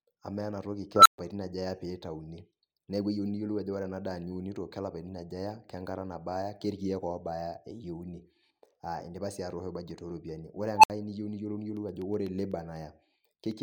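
At 0.96 s an unstable filter takes over the speech: a recursive stage with bad coefficients feeds back on itself, so a tone near 1.5 kHz swells over about 95 ms to clipping, overflows, and the output drops to silence for 128 ms until the filter resets at 1.18 s, just before "aja eya". The same fault returns at 10.76 s with a tone near 1 kHz, building over about 72 ms, followed by a 64 ms gap ending at 10.90 s, ahead of "niu niyiolou".

After "niu niyiolou", from 11.77 s to 13.51 s, periodic USB or driver dropouts appear. Something blocks the audio path every 0.125 s, and each time a very brief slice of audio, a fraction of a millisecond, is replaced with silence. About fifteen of these losses occur, heard as an evenly spaced train of ticks riding on the speech.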